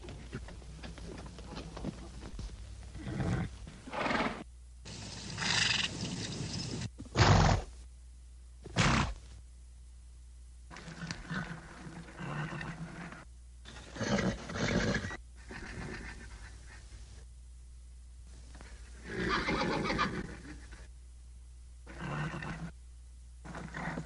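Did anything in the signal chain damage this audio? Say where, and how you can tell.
Yes. The damage happened on the network, and the sound shows it as short concealed packet loss. Four brief holes were papered over: 2.29 to 2.33 s, 6.14 to 6.16 s, 15.64 s, and 20.22 to 20.24 s. The first gap lost about 30 ms of audio. The others lost about 10 ms each. Each hole sounds like a tiny smear or wobble. That happens because the receiver's decoder stretched the preceding sound across the missing stretch, then crossfaded back into the real signal.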